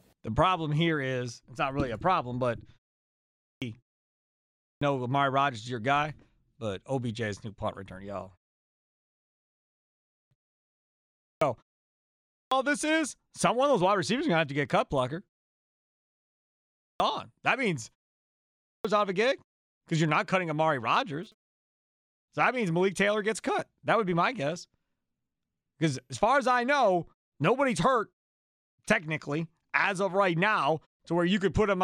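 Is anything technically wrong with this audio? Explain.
Yes, two faults are audible in this speech clip.

Clipped start after a pause occurs eight times, at 3.0, 4.25, 8.95, 9.75, 10.78, 11.93, 16.42 and 18.2 s. The first is right after "really a problem but", and two fall just before "this is someone of" and "out of a gig". After each gap of 0.3 to 1.2 s, the output device appears to drop into a sleep state. It takes roughly 0.56 to 0.65 s to wake, so the opening of each phrase is lost and speech bursts in abruptly. On a waveform, the envelope jumps from flat silence straight to full level with no onset. A spectrogram shows phrases beginning without their initial sounds.

GSM phone buzz appears from 21.23 to 22.16 s. A nearby 2G phone transmitting data sends radio bursts at 217 Hz, which the audio circuitry rectifies into sound. The result is a harsh, raspy buzz about 30 dB below the speech that stutters in and out rather than holding steady. 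A spectrogram shows a comb of evenly spaced horizontal lines at 217 Hz and its harmonics, appearing in patches. Zoomed in, the waveform shows a regular pulse train riding on the speech.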